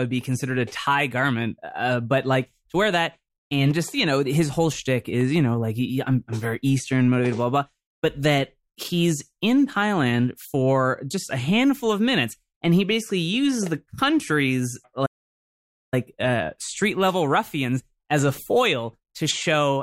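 A playback stall hits at 15.05 s and lasts until 15.94 s: after "basically uses the country's" the speech cuts to silence for about 0.86 s, then resumes with "uh street level ruffians". The likely cause is the player running short of data or being blocked.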